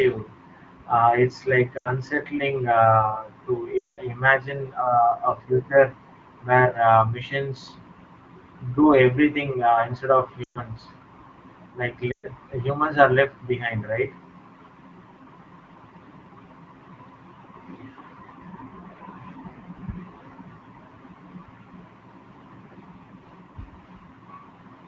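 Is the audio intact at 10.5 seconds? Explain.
No. Lost AMR speech frames run from 10.43 to 10.59 s, a 120 ms gap that points to six 20 ms frames failing their checksum. The wideband decoder stretches the last good pitch and vocal tract settings with falling gain, so the sound smears and fades quickly before returning briefly weak and rough.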